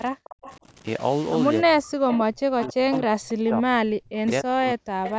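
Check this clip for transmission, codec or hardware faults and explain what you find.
Three faults are present in this speech clip, and the band stops at 8 kHz as expected from call microphone processing.

Stuck bit, throughout: one sample bit likely held at a fixed value, so roughly half the samples carry a constant offset tied to the waveform's shape. It adds noise over the voice, and the pauses carry a hiss that never fully clears.

Speech suppressed in double talk, at 0.15 to 0.42 s, 0.59 to 0.65 s and 1.63 to 5.18 s: the echo canceller likely could not separate the local talker from the far side's loudspeaker echo and turned both down. The voice dips by up to about 40 dB (about 15 dB in the short middle dip), with about 3 s affected in the last section.

Echo leak, at 0.24 to 0.56 s, 2.11 to 2.18 s, 2.63 to 2.73 s, 2.93 to 2.98 s and 5.04 to 5.13 s: loudspeaker sound likely escaped cancellation and returned. 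A copy delayed by 272 ms comes back, about 10 to 20 dB below the speech.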